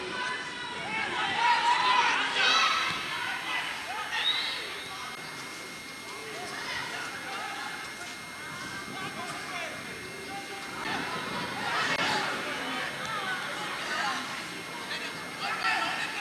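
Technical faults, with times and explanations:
2.47 s to the end: switching supply whistle. A switching power supply drops into an audible burst mode, and its cycling leaks into the audio path as a steady high whistle near 2.13 to 2.14 kHz, wavering only slightly, roughly 15 dB below the sound.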